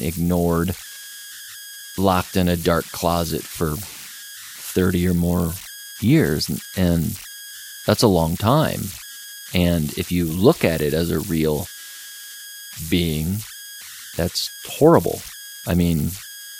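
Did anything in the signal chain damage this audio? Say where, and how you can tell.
Yes, at the converter: converter idle tones from undithered delta-sigma patterns whistle around 1.5 kHz throughout, about 16 dB below the speech, showing as a steady horizontal spectrogram line.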